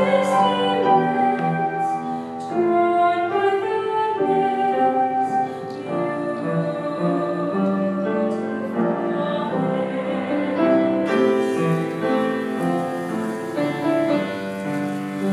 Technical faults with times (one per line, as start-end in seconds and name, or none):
11.06-15.32 pre-emphasis left on